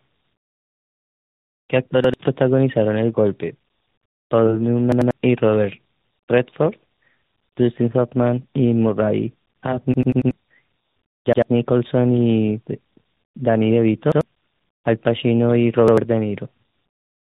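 From start to finish the call passed through tandem speech coding: it was coded with G.726 at 32 kbit/s, carried as G.711 mu-law, then decoded and recoded by AMR-NB at 10.2 kbit/s. That is two speech codecs in a row, each working on the other's damage. The speech sounds rough, muffled and warbly, and nothing survives above 3.8 kHz.

On top of that, the playback device ran short of fresh audio six times and played the last buffer again. Each repeat lasts about 93 ms, which fits a 4096-sample buffer. It is heard as a stutter with a hard join. At 2.04–2.14 s, 11.33–11.42 s, 14.12–14.21 s and 15.88–15.98 s the piece plays once more, dropping roughly a tenth of a second. At 4.92–5.11 s it repeats twice. At 9.94–10.31 s it repeats four times, a longer stutter covering about 0.4 s of lost audio.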